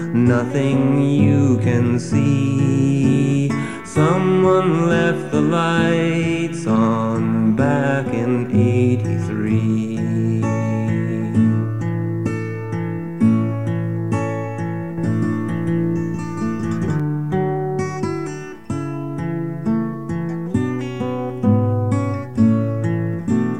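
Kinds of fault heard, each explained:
Doubled audio track: an equally loud copy trails roughly 200 ms behind, with no decay. It starts and stops abruptly, likely from a duplicated capture path.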